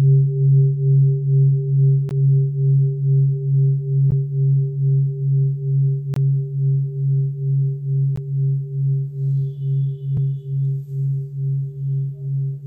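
Brief hard-edged holes of silence cut the sound at 2.09, 4.11, 6.14 to 6.16, 8.16 and 10.17 s, one every 2 s, lasting 3 to 23 ms. This is a gap between stream segments: timestamps leave small holes the player fills with silence.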